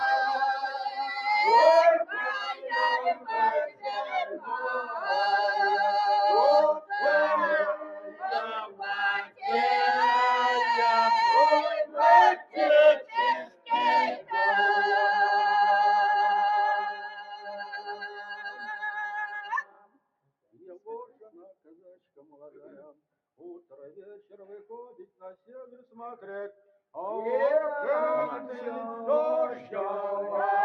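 A noise suppressor built for speech has been left running over music or other non-speech sound throughout. It mistakes sustained tones, room ambience and reverb for noise and pulls them down, while sharp attacks slip past. The level therefore swings by something like 15 dB, so the sound pumps and thins as held material sinks and transients jump back up.

That same processing produces distinct episodes of sound cut by the noise suppressor, where steady or decaying material is pushed down harder than its surroundings. They fall at 0.54 to 1.27 s (about 10 dB down), 2.04 to 5.01 s (about 17 dB), 6.77 to 6.92 s (about 16 dB), 7.76 to 9.45 s (about 17 dB), 11.69 to 14.33 s (about 17 dB), 16.87 to 24.36 s (about 17 dB, with roughly five seconds of it affected), 25.03 to 25.94 s (about 14 dB) and 26.54 to 26.71 s (about 10 dB). In each, steady or fading sound sinks in level or has its decay cut short, while attacks mostly come through.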